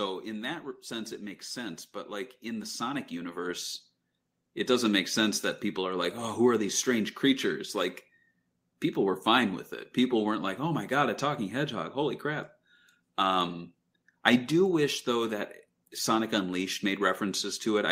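From 0.05 to 0.88 s, automatic gain falling pulls the level down by about 4 dB. The gain control judged the opening too loud and backed off. The speech starts strong, then sinks slightly. Its background drops with it.

Automatic gain rising follows from 0.88 to 6.05 s. Now the control judged the input too quiet. It raised its gain slowly, by about 12 dB over five seconds. The speech and the background noise swell together, so the room grows audibly louder.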